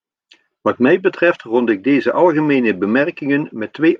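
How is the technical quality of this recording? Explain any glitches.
Nothing in the recording stood out as a technical problem on listening, so there are no glitches to explain.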